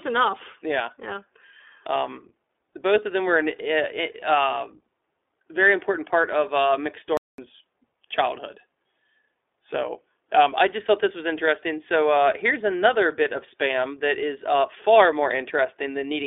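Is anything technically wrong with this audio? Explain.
Yes, three technical faults are audible in this speech clip.

iLBC codec, throughout: The whole recording has passed through the iLBC narrowband VoIP codec, and the damage is plainly audible. The line band runs only from about 300 Hz to 3.6 kHz, so the speech sounds thin and boxy. Each short frame's excitation is coded on its own, and the character and rate point to 15.2 kbps with 20 ms frames. The result is a rough, slightly synthetic texture over the voice.

Lost iLBC frames, 4.20 to 4.23 s: One frame's worth of audio, 20 ms, went missing. The decoder covered the hole by repeating the last pitch cycle blended with noise, which gives a brief held, faintly buzzy vowel-like smear in place of the real signal. Because iLBC frames don't depend on their predecessors, the decoder recovers immediately and the speech returns cleanly right after the concealed stretch.

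Playback stall, 7.17 to 7.38 s: The audio cuts to silence for about 210 ms in mid-flow and then resumes. The likely cause is the player starving for data or its output thread being blocked, so nothing reached the output until it caught up. The result is an abrupt dead gap interrupting the speech rather than any distortion of the sound itself.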